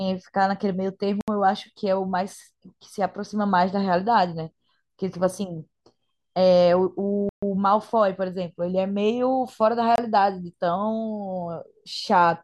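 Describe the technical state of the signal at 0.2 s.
Nothing is wrong with the signal at 0.2 s: the speech is intact there, with no dropout, distortion or other technical fault.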